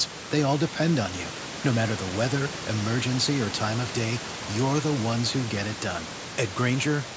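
No technical faults are audible.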